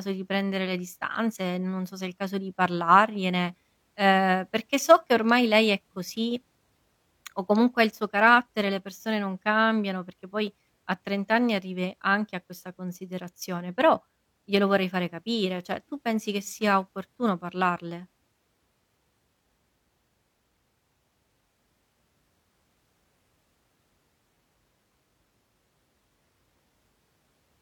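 Nothing in this recording trips any alarm; no technical faults turn up at any point.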